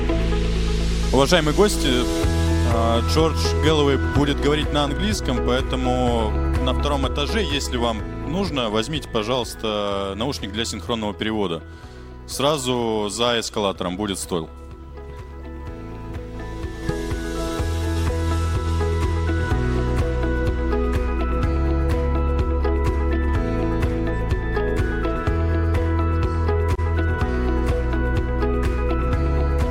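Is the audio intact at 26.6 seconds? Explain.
No. A resampler restarted on every block runs from 24.62 to 29.0 s. Each 20 ms block is converted in isolation, so every edge carries a small error. These errors repeat at 50 Hz, producing a buzz that follows the signal and falls silent in gaps.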